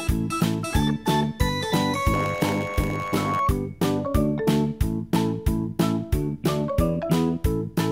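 From 2.13 to 3.4 s there's a block size mismatch (padded). One stage hands over shorter blocks than the next expects, and zeros fill the rest. That tiny gap repeating gives a buzz at about 91.9 Hz. The audio drags to 0.919 times speed while the timbre stays.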